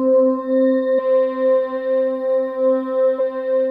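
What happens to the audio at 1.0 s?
A brief glitch cuts through the audio from 0.98 to 1.00 s, caused by damaged data in a compressed stream that made the decoder misread frames and lose sync.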